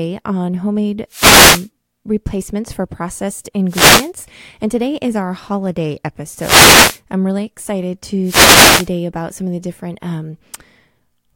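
Speech clip with four wireless microphone noise hits, at 1.09–1.69, 3.68–4.11, 6.36–7.00 and 8.23–8.89 s: brief static swishes from FM fades, hissy rather than silent like digital dropouts.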